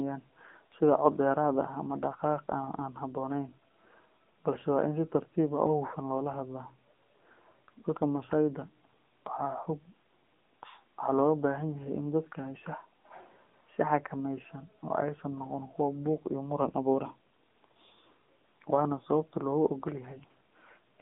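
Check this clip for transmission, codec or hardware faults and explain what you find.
The clip carries one fault, present throughout: AMR narrowband mobile codec damage. The 8 kHz narrowband coding leaves nothing above 3.7 kHz, passing roughly 200 Hz to 3.6 kHz. Sparse vocal-tract modelling, consistent with a mid-range mode near 7.95 kbps, makes the speech plainly buzzy and synthetic.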